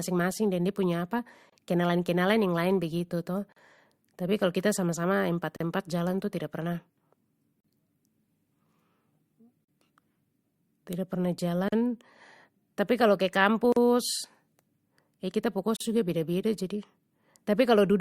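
Gaps at a join of encoded pieces occur at 1.50, 3.52, 5.56, 7.60, 9.64, 11.68, 13.72 and 15.76 s, about every 2.0 s. The speech was encoded in roughly two-second pieces and joined without trimming, so each encoder's start-up delay and final-frame padding remain as a short silence. The first gap lasts 27 ms and the rest 40 ms. Each is a brief dropout with smeared edges, after which the speech resumes where it stopped.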